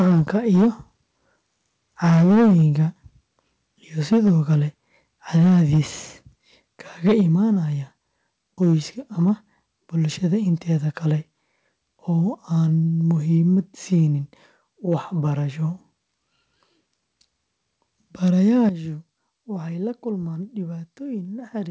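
From 0.0 to 0.67 s the loudest syllables crackle harshly, with their tops flattened by about 10 dB. This is likely microphone overload, with input gain set so high that peaks slam into the converter's limit. It returns at 2.04–2.82 s (about 8 dB, roughly a fifth of samples), 4.12–5.79 s (about 6 dB), 7.06–7.21 s (about 7 dB) and briefly at 18.63–18.69 s (about 1 dB).

At 0.12 s the level drops abruptly by about 2 dB. This is likely the microphone volume stepped down by the call software reacting to those clipped peaks. Further drops follow at 4.13 s (about 2 dB), 7.21 s (about 3 dB) and 18.69 s, where both the sound and the background fall by about 10 dB at once. Above 8 kHz the audio is silent, which fits the G.722 call codec.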